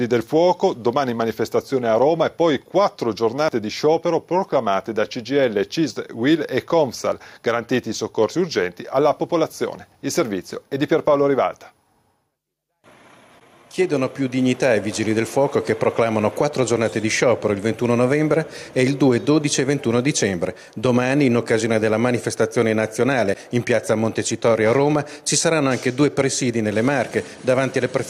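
Gain pumping runs through the whole clip, with the level swinging by something like 5 dB. Loud and quiet passages sit unnaturally close together, so the sound feels squashed. The likely cause is a microphone gain set far too high, with a fast limiter or compressor clamping down on each peak. On a waveform the peaks look flattened to a near-constant ceiling, and a spectrogram shows the noise floor brightening between loud events and darkening beneath them.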